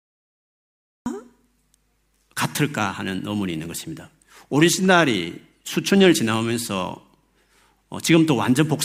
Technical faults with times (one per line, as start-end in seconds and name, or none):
0.00-1.06 cut-off start